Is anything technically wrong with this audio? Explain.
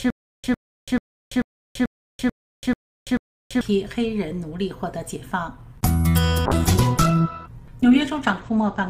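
Yes, two faults.

From the start to 3.61 s there is a stutter with silent gaps: a fragment of about 103 ms repeats eight times, each followed by roughly 336 ms of digital silence, so it recurs every 438 ms. The likely cause is a stalled player or stream replaying its last buffer on each retry, with the intended audio lost.

From 6.47 s to the end the sound turns dull and coarse, with the top end gone above 8 kHz. This is a call bitrate drop: the encoder rate fell from 48 to 11 kbps, forcing cruder coding and a narrower band.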